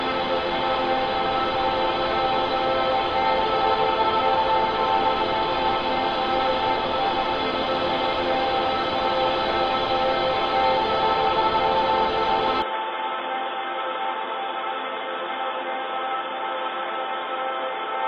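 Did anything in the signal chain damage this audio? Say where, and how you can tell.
Yes. From 12.62 s the sound abruptly dulls, loses everything above 3.8 kHz, drops about 5 dB and gains new noise: likely the input switched to a poorer device.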